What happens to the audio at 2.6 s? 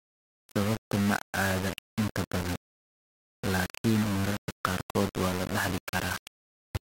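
At 2.6 s, as throughout, the speech is grainy, with quiet parts sputtering. This is likely low bit depth without dither: rounding to 4 bits leaves an error that tracks the speech.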